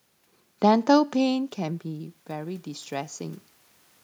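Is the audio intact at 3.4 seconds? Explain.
No. At 3.4 seconds the automatic gain rising is still under way, running from 1.21 to 3.48 s: after the talker moved back around one second, the input fell about 12 dB, and the control slowly added about 4 dB. Voice and room noise swell together, seen as a rising waveform envelope and a brightening noise floor on a spectrogram.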